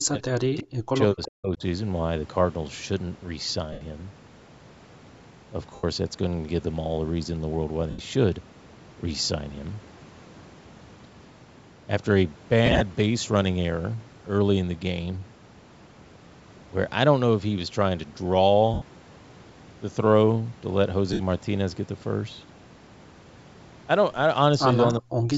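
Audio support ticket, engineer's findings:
Speech suppressed in double talk: 0.00–1.63 s and 24.99 s to end, speech ducked by about 40 dB, likely echo canceller muting both talkers. Gain dips, unlike the noisy smear of frame loss.

Echo leak: 1.22–1.31 s, faint delayed copy about 20 dB under speech, 363 ms behind, likely residual from a loudspeaker on the call. A repeat of earlier sound, not a dropout.

Lost LE Audio frames: 3.72, 5.75, 7.90, 18.74 and 21.13 s, each 68–83 ms, and 12.66–12.82 s scattered in runs up to about 30 ms. The LC3 concealment, with 7.5 ms frames, sounds like a noisy smear fading down.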